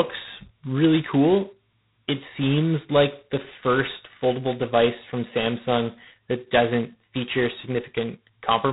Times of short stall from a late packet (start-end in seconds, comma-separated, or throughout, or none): none